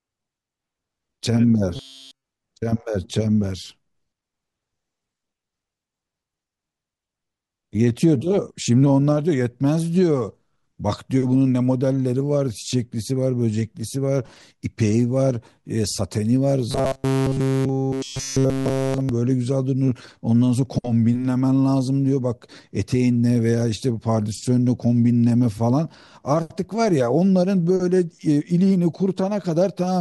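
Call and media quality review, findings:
Robotic sound from repeated short buffers, 1.76–2.24 s: speech collapses into a rigid, metallic buzz fixed at 134 Hz, with the words only loosely traceable. Same symptom at 16.71–19.09 s. Likely cause: receive-side playout starved of new audio, looping the last ~7.5 ms segment to fill the gap. That loop length sets the 134 Hz pitch. Virtually all real audio in both spans is skipped.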